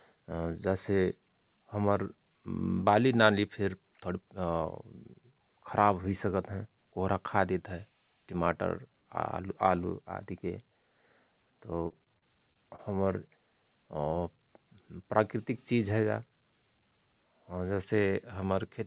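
From 11.88 to 12.80 s the speech turns choppy and robotic, the sign of repeated packet loss (robotic sound). Six separate holes, the longest 29 ms, are each patched by stretching the preceding sound, so about 16% of that stretch is concealed. Unlike one dropout, the gaps recur closely, giving a stuttering texture.

Then, between 14.76 and 15.47 s, a jitter buffer speed-up makes the talker sound briefly hurried, running at 105% as the receiver trims about 40 ms of pitch periods to shed built-up delay. Unlike a resampling or clock error, the pitch stays unchanged; only the pace quickens. Throughout, the call path's bandwidth stops at 4 kHz, which fits a G.711 A-law narrowband codec.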